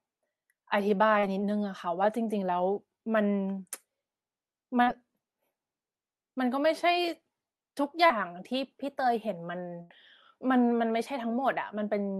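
A speech recording carried over a call path whose 12 kHz top end points to Opus. Short concealed packet loss leaves brief smears at 1.19, 4.83 and 8.06 s. Each time, about 40 ms never arrived and was patched by extending the prior sound. A burst of packet loss at 9.82 to 9.93 s drops about 80 ms. It becomes a held, fading tail before the sound resumes further on.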